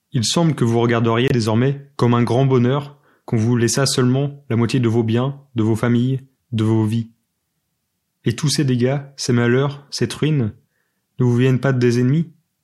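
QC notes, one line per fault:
1.28–1.32 s, Bluetooth dropout: the speech briefly cuts to silence, then picks up further along as if it had kept playing. Likely one late wireless packet discarded by the headphones, about 23 ms of audio, which fits a single codec frame.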